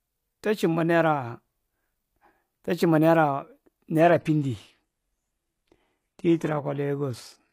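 At 4.0 s the adaptive stream abruptly drops to a lower bitrate with no gap: treble vanishes above 12.3 kHz and codec artefacts rise, consistent with a very low-rate HE-AAC rendition.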